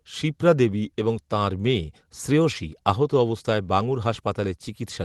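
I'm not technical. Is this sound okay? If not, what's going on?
Yes, no faults here.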